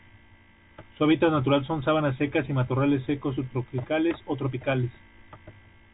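No technical faults are audible.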